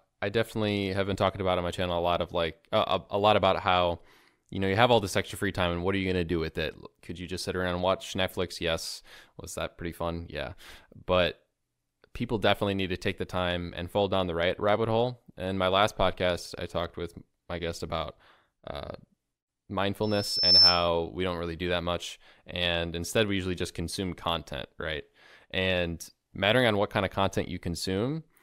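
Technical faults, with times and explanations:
20.03–20.88 s, loudspeaker feedback squeal: a 5.3 kHz tone swells over half a second to about 10 dB above the speech. The microphone is re-amplifying its own loudspeaker.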